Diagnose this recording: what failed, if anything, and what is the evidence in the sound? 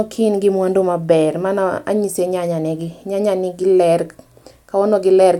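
Nothing failed: no stage of the recording chain leaves any fault evidence in the sound.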